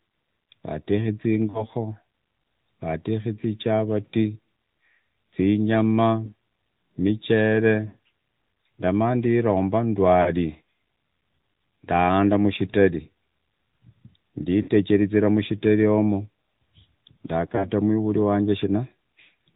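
Throughout, the speech passes through the AMR narrowband mobile codec at 10.2 kbps. Nothing above 4 kHz survives, and the low-rate vocal-tract model leaves the voice plainly buzzy and synthetic. Lost AMR speech frames fail their checks at 1.50–1.66, 6.26–6.33, 7.88–7.97, 10.22–10.33, 14.62–14.70 and 17.56–17.70 s, just before "mwivuri wanje". The decoder stretches the last good sound with falling gain, so the single lost frames at 6.26 and 17.56 s are heard as a brief dip or warble, while the longer runs are drawn out and fade toward silence before the voice returns weak or rough for a moment.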